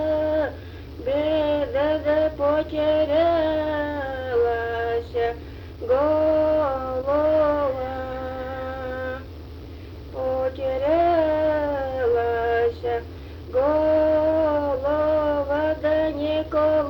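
No technical faults are audible.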